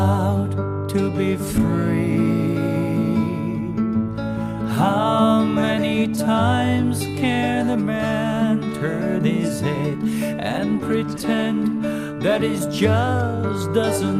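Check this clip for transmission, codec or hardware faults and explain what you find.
Nothing in the clip stood out as a problem on listening.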